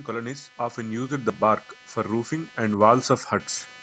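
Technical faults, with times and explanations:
Throughout, computer activity noise: a faint buzz pulsing a few hundred times a second, caused by computer load shifting the audio circuit's shared ground.
0.06–1.47 s and 2.07–3.11 s, automatic gain rising: the gain control judged the input too quiet and gradually raised speech and background together, by about 6 dB, then about 4 dB.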